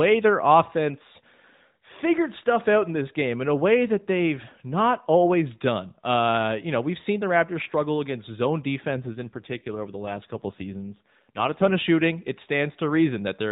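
The speech runs through a narrowband mobile path with nothing above 4 kHz. After "struggle against zone", from 8.88 s to 11.76 s, there is an AMR rate drop. The codec shifts to fewer bits per frame, which fits a fall from 12.2 to 5.9 kbps. The band stays the same. There is no gap. For about 2.9 seconds the voice turns rougher and more buzzy and synthetic. Then the higher rate returns.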